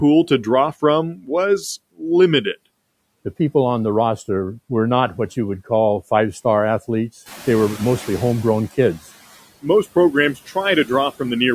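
A speech recording carrying noise suppressor artifacts from start to finish: the suppressor pulls the background down by about 17 dB, so the noise sinks in the gaps and swells back under each phrase. On a spectrogram the noise floor pumps in step with the speech. Speech cut by the noise suppressor occurs twice. Just after "to draw", from 1.16 to 1.3 s, and again from 10.34 to 10.56 s, the suppressor mistakes some of the speech for noise and ducks it along with the background, by about 10 dB and about 13 dB respectively, over roughly a tenth of a second each time. Those moments sound swallowed, and the waveform shows a brief notch in the envelope where the speech energy should continue, with the matching spectrogram columns dimmed. The noise suppressor catching up follows "call five star athletes". The room noise jumps by about 14 dB near 7.5 s and settles about 18 dB below the speech. Because the suppressor's estimate lags, that noise first comes through with little reduction, then fades over 1.76 s, from 7.26 to 9.02 s, until it is cut by about 11 dB. 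On the spectrogram this shows as a bright band of broadband noise that gradually darkens.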